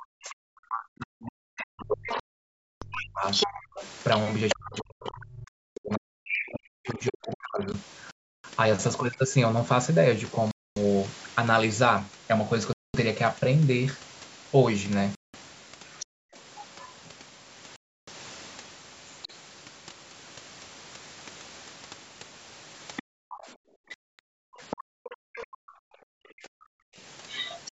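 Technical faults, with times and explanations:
0.00–7.73 s, speech suppressed in double talk: the main voice dips by up to about 40 dB for roughly five seconds in total. The echo canceller likely couldn't separate it from the far end talking over it.
2.08–9.16 s, other side's voice leaking through: a second voice sits only about 5 dB under the talker. Leftover loudspeaker echo is likely getting past the canceller into the mic.
2.20–2.85, 5.48–5.78, 8.11–8.44, 10.51–10.80, 12.73–12.96, 15.15–15.36, 17.76–18.09 and 23.94–24.19 s, Bluetooth stall: sound cuts to silence for 0.19 to 0.62 s, then carries on. This is likely the headphone buffer running dry while delayed packets were resent.
16.00–17.10 s, other side's voice leaking through: a fainter far-end voice comes through again, around 15 dB down. It's likely residual echo the canceller missed.
16.06–16.35 s, background gated by the echo canceller: the room sound drops by about 40 dB for about 0.3 s. 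The canceller clamped the mic while the loudspeaker played, then released it.
22.96–25.46 s, other side's voice leaking through: the far-end voice returns at about 15 dB below the talker. Again this is likely incomplete echo removal.
23.15–26.54 s, speech suppressed in double talk: short dips of up to about 40 dB, roughly 0.4 s altogether. Both sides are talking at once here, so the canceller likely turned everything down.
24.76–26.96 s, background gated by the echo canceller: the room tone drops out by up to about 40 dB, totalling about 0.7 s. The mic is being squeezed while far-end audio plays.
27.28–27.71 s, other side's voice leaking through: a last scrap of far-end voice sits about 10 dB down. It's likely echo slipping through at the very end, in call-processed audio with nothing above 8 kHz.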